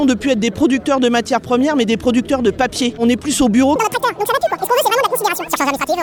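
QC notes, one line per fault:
3.76 to 6.02 s, section at the wrong speed: from 3.76 s to the end the audio runs at twice its recorded speed, with pitch rising roughly ten semitones in one abrupt step, so the sound turns high and hurried. Likely a playback or edit clock mismatch on that section.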